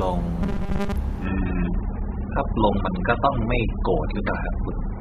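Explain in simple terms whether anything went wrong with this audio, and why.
From 0.43 to 0.96 s the speech turns into a flat, metallic buzz pitched at about 200 Hz, still loosely following the rise and fall of the talking. This is robotic sound from repeated short buffers. The likely cause is that fresh audio arrived too slowly, so the player kept replaying the last tiny slice, about 5 ms long, for most of that stretch. Those rapid repeats create the steady buzz, and the real audio underneath gets skipped.

From 1.26 s to the end, the speech suddenly sounds rougher, with no gap or pause at the switch. More compression artefacts creep into the sound. This is an adaptive stream at a lower bitrate. The connection slowed, so the stream swapped to a much smaller, lower-quality copy of the same audio, and it stayed on that copy for the rest of the clip.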